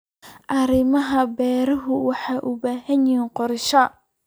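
No technical faults can be heard in the speech, so there are none to describe in time order.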